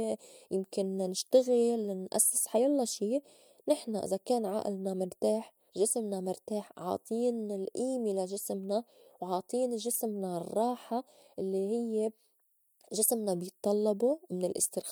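From 8.54 to 10.93 s, just after "مرتاح عاطين الئيمة لا", the converter's sampling clock wanders, causing sample clock jitter: each sample is captured a little early or late at random, on the order of a microsecond. Because the resulting error scales with how fast the waveform is changing, it sits roughly 35 dB below the speech and comes through as a gritty hiss that swells on loud, bright sounds and drops away in the pauses.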